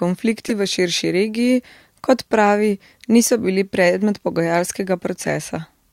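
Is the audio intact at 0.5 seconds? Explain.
No. At 0.5 seconds the speech is interrupted by a corrupt frame decoded fault running from 0.47 to 0.51 s. Flipped bits inside a compressed frame went unnoticed, and the decoder reconstructed it with wrong gains and misread spectral codes. Energy lands at frequencies where it doesn't belong for roughly four frames' worth of audio. The result is a brief error that peaks around -10 dBFS, the kind of damage heard as a chirp, squeak, blip or burst of noise over the speech.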